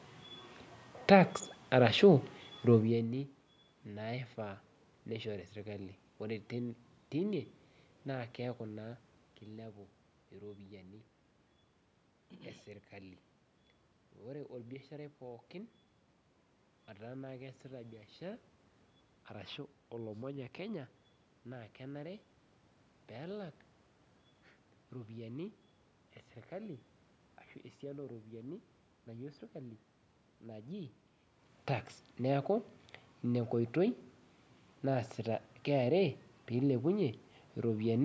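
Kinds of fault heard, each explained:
No faults found: the level shifts, room noise and talker movement are ordinary features of the recording, and the content stops near 8 kHz as expected from call microphone processing.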